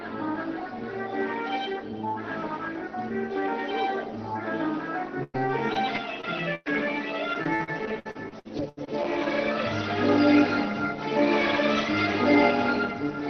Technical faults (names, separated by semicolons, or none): repeated packet loss (robotic sound)